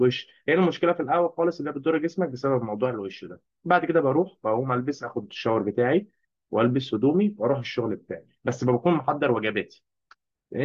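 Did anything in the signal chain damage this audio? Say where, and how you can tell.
No, nothing in this speech recording stood out on listening as a sign of damage at any stage of the signal chain.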